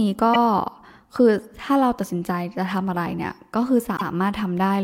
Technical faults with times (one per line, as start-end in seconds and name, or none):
0.33-0.38 repeated frames
3.96-4.06 repeated frames